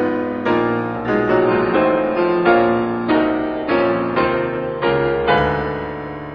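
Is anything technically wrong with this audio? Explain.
Yes. From 1.4 to 5.4 s an adaptive stream drops to a lower bitrate: a slowed connection forces a leaner encode. The treble vanishes abruptly, with nothing above 5 kHz, fitting roughly 16 kbit/s AAC. A spectrogram shows a sharp ceiling, and the waveform shows no gap.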